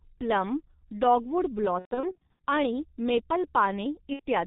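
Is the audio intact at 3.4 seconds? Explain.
No, at 3.4 seconds the speech is still inside the G.723.1 codec damage that runs the whole clip: 30 ms frames at about 6.3 kbit/s, nothing above 4 kHz, so it's muffled, hoarse, consonants smeared.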